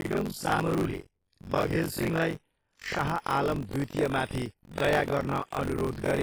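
Throughout this speech clip the sound is ringing and washy, with a hiss that swells and fades with the voice. That is heavy transform-codec damage, likely from WMA compression at a low bitrate around 24 kbps. Long blocks smear quantisation noise over tens of milliseconds and drop weak detail. A robotic buzz at 46.9 Hz also rattles wherever there is signal, which points to buffer tearing with a 1024-sample buffer. Writer and reader cross inside every period, so most of each buffer replays audio from roughly 40 ms earlier, with hard joins at both edges.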